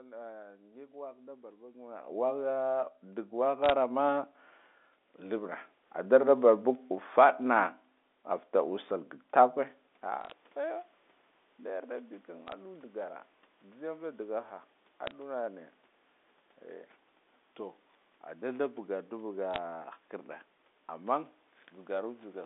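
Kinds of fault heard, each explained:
Automatic gain rising: Between 3.3 and 6.49 s the voice and the background swell together by about 9 dB, climbing steadily rather than jumping. The automatic gain control judged the input too quiet and raised its gain gradually over those three seconds.
Bit errors on a digital phone line: Short bursts of sharp ticks and crackle sit over otherwise unchanged speech at 3.64, 10.21, 12.47, 15.07 and 19.54 s. Stray bits were flipped on the G.711 line, each corrupting one sample, with sign or high-bit hits giving the loudest clicks.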